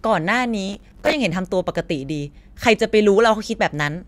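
Processor overload crackle runs from 0.69 to 1.13 s: roughly thirty missed deadlines on buffers of about 5 ms replay stale audio, causing gritty tearing.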